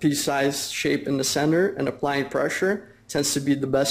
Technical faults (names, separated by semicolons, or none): none